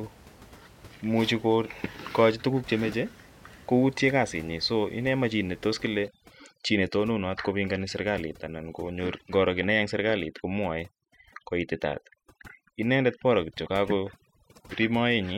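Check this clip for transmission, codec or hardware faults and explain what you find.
One fault is present: overdone noise removal, from 6.08 s after "ne tos" to the end at 15.38 s. A noise reducer set too aggressively drives frequency bands near its noise estimate down to nothing, taking quiet speech detail with them. The room noise, about 25 dB below the speech, collapses into near-silence with twinkling specks. Unlike low-bitrate codec artefacts, the damage follows the noise floor rather than smearing loud passages.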